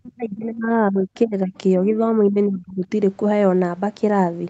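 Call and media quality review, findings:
Speech suppressed in double talk, 0.0–1.53 s, 1.79–1.98 s, 2.29–2.85 s: near-end level dips deep in the first and third spans, shallow in the second. Likely echo canceller gain reduction during far-end activity. Attenuation, not packet-loss gaps or codec glitches.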